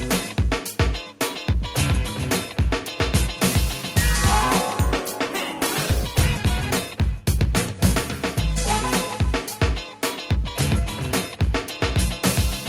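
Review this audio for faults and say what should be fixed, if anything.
A call bitrate drop runs from 4.93 to 9.47 s. The sound turns coarse and muffled, consistent with the encoder falling from 64 to 15 kbps. Reserving bandwidth headroom and smoothing bandwidth estimates would prevent it.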